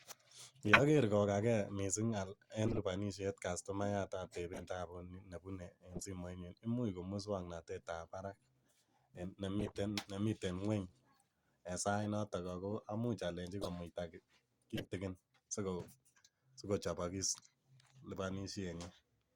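Damaged compressed frames are being decoded as if intact (corrupt frame decoded). Flipped bits make the decoder apply wrong gains and codes, so stray energy lands at the wrong frequencies for the length of the bad frames. In this speech the results are short chirps and noise blips at 0.66–0.80 s (loudest, near -10 dBFS), 2.67–2.79 s before "lipanishet cuctomayat", 4.53–4.70 s, 5.91–6.06 s, 9.59–9.72 s, 12.04–12.06 s after "en sait" (a single frame, faint), 13.61–13.68 s after "amuch alenjin", and 14.76–14.88 s.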